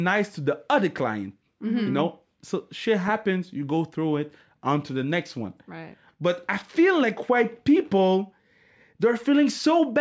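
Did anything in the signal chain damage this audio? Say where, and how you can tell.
No, the speech signal shows no damage from any stage; it has passed through a call's microphone processing, whose low bass cut and bandwidth ending at 8 kHz are normal for that path.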